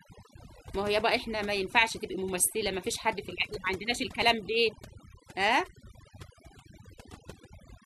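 From start to finish the speech carries overdone noise removal: the denoiser was pushed so hard it's switching off whole frequency bands near its noise estimate, taking quiet bits of the voice too. Gaps drop away and break up into twinkly specks.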